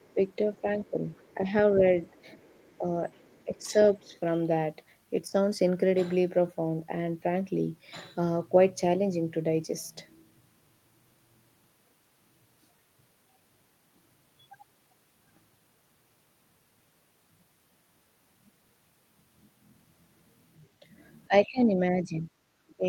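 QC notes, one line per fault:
0.00–1.34 s and 2.42–4.19 s, other side's voice leaking through: a faint second voice, about 35 dB below the talker, likely from residual echo; it appears on the spectrogram as weak, separate harmonic traces.
0.14–1.83 s, 2.79–2.84 s and 3.45–4.14 s, speech suppressed in double talk: the voice dips by up to about 10 dB, briefly and in pieces, while the other side speaks. The likely cause is the echo canceller ducking both sides at once. The waveform envelope shows short notches.
21.28 s to the end, speech suppressed in double talk: the voice drops much further, by up to about 20 dB. The waveform shrinks visibly, and the spectrogram thins and fades.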